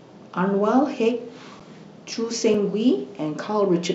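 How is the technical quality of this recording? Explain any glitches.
The recording has two dropout glitches, both a block of digital silence. At 1.60 s the signal falls to zero for about 8.8 ms, and at 2.54 s for about 2.7 ms, a gap that fits a 128-sample buffer. Each gap comes from a stretch of output samples left as zeros, typically when audio processing misses its buffer deadline. Because the speech stops and resumes with no fade and each gap is under about 15 ms, both are heard as a tick or dip rather than as silence.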